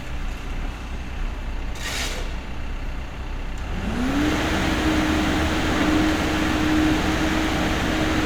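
No technical faults can be heard anywhere here.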